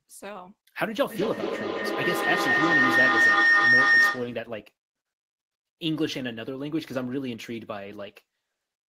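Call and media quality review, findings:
Rising whistle near 2 kHz, pulsing about every fifth of a second, 1.1–4.57 s, peaking about 9 dB above speech. Feedback howl: two co-located call devices, mic-to-speaker loop gain exceeding unity.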